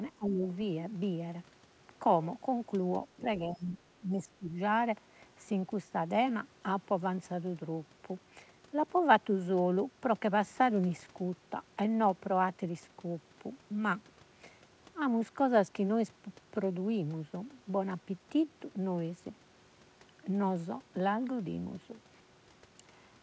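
From 0.16 to 0.45 s the speech sinks by roughly 20 dB, and from 3.17 to 4.56 s it dips again in patches by around 15 dB, thinning and briefly dropping out. Both match speech suppressed in double talk. The likely cause is an echo canceller that, with both sides talking, could not separate the near talker from loudspeaker echo and attenuated everything. Throughout, the band stops at 8 kHz, which fits a wideband call codec such as G.722.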